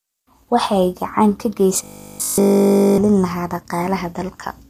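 From the first moment to the end, the speech carries plainly audible low-delay AAC compression, most likely AAC-ELD at a rate that fits about 32 kbps. The codec works on very short frames, so it cannot separate the voice's pitch harmonics cleanly at this bitrate. Noise fills the gaps between harmonics, giving the voice a rough, grainy texture, and the top band sounds thin and synthetic rather than natural.

From 1.84 s to 2.98 s the voice collapses into robotic sound from repeated short buffers. The likely cause is audio arriving too slowly for playback, so the software keeps replaying the last buffer, which fits a length of about 20 ms, while the real audio is skipped. Essentially all of this stretch is made of these repeats. Looping at that period imposes a fixed 50 Hz pitch, so the voice becomes a rigid, metallic buzz that only loosely follows the speech.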